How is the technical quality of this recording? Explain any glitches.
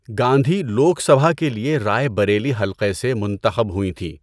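The technical quality of this recording is sound, with no glitches to explain.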